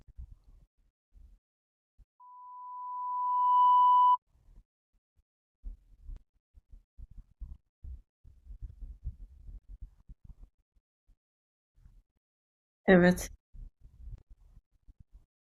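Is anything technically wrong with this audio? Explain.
Yes. Loudspeaker feedback squeal runs from 2.20 to 4.18 s. The microphone picks up its own loudspeaker, and the loop gain exceeds one at 993 Hz. That tone swells over about a second and a half to roughly 10 dB above the speech.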